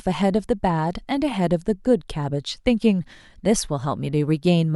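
No technical faults can be heard anywhere in this speech recording. Nothing in the sound calls for comment from a technical standpoint.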